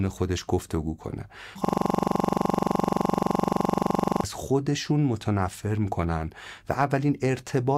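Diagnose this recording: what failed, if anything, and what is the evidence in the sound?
From 1.65 to 4.24 s the speech freezes into a rapid, rattling stutter repeating at 23.4 Hz. This is a system hang loop at the driver or buffer stage: while the host stalled, the hardware replayed one 42.67 ms ring-buffer segment about 60 times, which fits a 2048-sample buffer.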